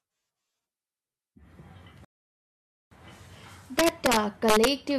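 At 2.05 s the speech drops abruptly into silence and stays there until 2.92 s, then carries on from exactly the point where it stopped. That is a rebuffering stall. The player used up the audio it had downloaded and paused until more arrived. Nothing is skipped, but about 0.87 s of dead air is inserted into the timeline, and the pause sits in the middle of the speech's flow.

From 3.79 s to 4.67 s the louder moments of the speech break into harsh, violent cracks, far more brutal than ordinary clipping distortion. This is integer overflow. The signal was pushed about 2 dB past the largest value the integer format can hold, and instead of being limited at the ceiling, each overshooting peak wraps around to the opposite extreme. Every wrap is a full-range jump, and that jump is what produces the sharp crack.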